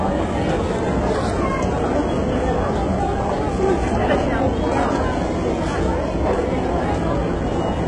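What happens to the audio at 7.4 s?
At 7.4 s the top end sounds gritty and metallic, with harmonics that don't line up above the crossover and nothing at all above 11 kHz. This persists through the whole clip rather than arising at that moment. The likely cause is heavy HE-AAC compression, which fits a very low bitrate near 12 kbps. The codec coded only the lower spectrum and rebuilt the treble by copying lower bands upward under a coarse envelope.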